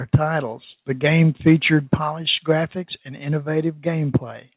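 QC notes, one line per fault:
0.14–0.16 s, microphone overload: a brief harsh crackle. The peak sits about 6 dB over the converter's limit, flattening roughly a third of the samples, likely from input gain set too high.
0.15 s, microphone volume stepped down: the level drops suddenly by about 2 dB, right on that distorted peak, likely the call software cutting the input gain.
1.47–1.53 s, microphone overload: after "the game", a milder rasp. The peaks run about 1 dB over the limit and a few percent are clipped, likely from excessive input gain.
2.22 s, microphone volume stepped down: just before "graphics and", the sound and background fall abruptly by about 4 dB, likely from an automatic gain reduction.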